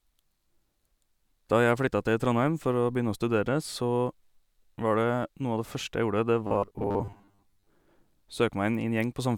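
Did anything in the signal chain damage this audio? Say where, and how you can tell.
Yes, there's robotic sound from repeated short buffers between 6.47 and 7.69 s. The speech turns into a stiff, metallic buzz pinned at 100 Hz, with roughly half of it repeated material. That's likely a buffer underrun at the driver, looping 10 ms chunks while real audio gets skipped.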